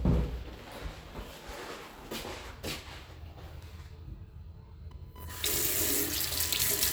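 From about 4.91 s right through to the end there's computer activity noise, a buzzy, chirpy scratching pulsing at roughly a kilohertz, sitting around 20 dB under the sound. The computer's shifting load is disturbing the audio circuit's shared ground, so the noise follows the machine, not the audio.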